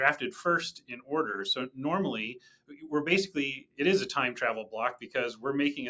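A noise suppressor applied to music or sounds runs from start to finish. A suppressor tuned for speech keeps judging the steady, sustained parts of this material to be noise and pulling them down, so the level swings by around 10 dB as it clamps and releases. Onsets get through, but held sound and tails sag, giving a pumping, fluttering and thinned character. The call's microphone path is audible only as a band that stops at 8 kHz.

Sound cut by the noise suppressor hits hardest at 0.77 to 1.11 s, 2.36 to 2.88 s, 3.58 to 3.79 s and 4.99 to 5.15 s. In each span the suppressor treats the sustained or decaying sound as noise and cuts it by about 17 dB, easing to about 15 dB in the last span. The sound sinks in level or has its decay chopped short, leaving a brief dip where it should ring on.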